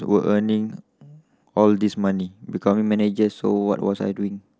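Speech, where a drift correction step, likely a clock-matching buffer adjustment, speeds playback by 6% from 2.73 s to the end, raising the pitch a semitone.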